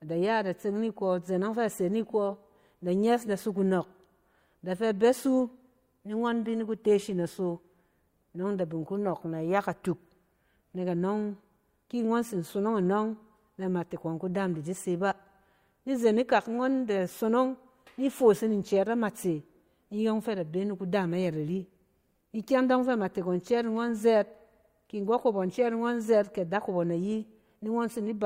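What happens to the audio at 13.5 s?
Nothing goes wrong at 13.5 s; the speech continues intact through that moment with no audible fault.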